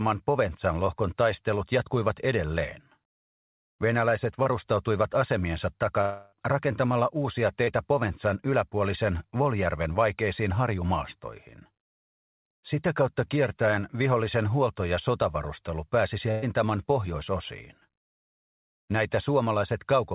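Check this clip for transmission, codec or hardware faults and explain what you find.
Three kinds of packet-loss fault are present, all on a call path band-limited to nothing above 4 kHz, which fits G.711 mu-law at 64 kbps.

Short concealed packet loss occurs at 4.43–4.48 s and 7.64–7.70 s. Each time about 30 ms of audio arrived too late to decode, and the receiver bridged the hole by extending the preceding sound for roughly 25 ms. The result is a brief smear or wobble before the real signal blends back in.

A long network dropout runs from 6.01 to 6.35 s. About 300 ms of audio never arrived, most likely because the network stalled. The concealment stretched the last sound across the entire gap, so there is no silence. Instead, a fading buzz or hiss sits where the missing audio belongs, and the sound resumes further on.

A burst of packet loss appears at 16.31–16.45 s, with about 120 ms of consecutive packets lost. 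The receiver kept repeating and attenuating the last sound for about 113 ms, producing a held buzz or fading hiss. Playback then picks up past the missing section.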